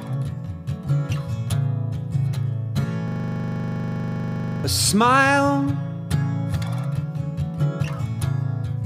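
From 3.08 to 4.64 s there's a system hang loop: playback froze and the hardware kept replaying the same 40 ms of buffer, so you get a rough 25 Hz buzz, dozens of identical repeats standing in for about a second and a half of lost audio.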